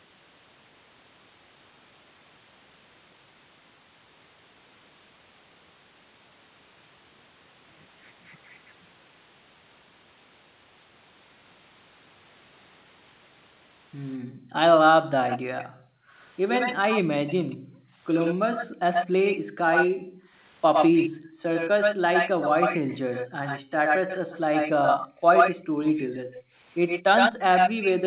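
From 14.18 to 22.08 s the background is gated by the echo canceller. Room sound dips by about 40 dB, for around four seconds in all.

From 15.29 s to the end, a delayed copy of the speech comes back 108 ms late, about as loud as the speech itself. The likely cause is an echo leak past the far side's canceller.

Gating returns at 23.32–23.77 s, again about 40 dB down. It returns once more at 25.08–26.57 s, shallower at about 25 dB, with the background dropping out briefly each time.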